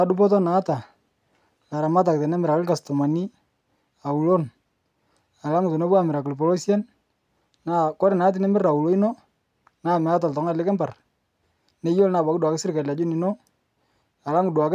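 Nothing technically wrong turns up anywhere in this speech recording, so there's no fault to time or trace back to a cause.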